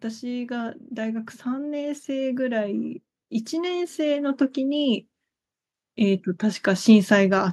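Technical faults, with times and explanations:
0.19–5.07 s, automatic gain rising: the gain control judged the input too quiet and ramped up about 10 dB, so speech and background swell together.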